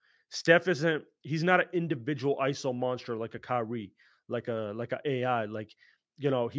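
Nothing goes wrong anywhere in this bit of speech; it's just gone through ordinary call microphone processing, which trims the deepest bass, and that's exactly how such a path should behave.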